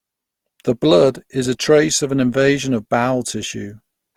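Throughout, the speech sounds swirly, hollow and smeared, with blurred attacks. This is generation loss, likely from about three re-encodes, fitting Opus near 48 kbit/s.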